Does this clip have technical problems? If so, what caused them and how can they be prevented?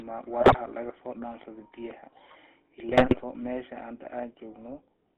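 Yes. The speech went through the GSM full-rate codec, which rebuilds it from a vocal-tract model driven by sparse, regularly spaced pulses, fitting a 13 kbps stream. The band runs only from 300 Hz to 3.5 kHz, and the voice carries a plainly audible buzzy, gravelly roughness throughout. Prevent this by carrying the call over a wideband codec such as AMR-WB or EVS instead.

GSM bit errors from a weak radio link corrupted the decoder's filter, pitch and gain values at 0.40–0.57 s and again at 2.88–3.19 s. The voice breaks into squawks, pops and gargling there, with the damage pointing to error rates of about 3.9 percent and 2.5 percent. Prevent this by improving signal strength or letting the network switch to a more robust codec mode.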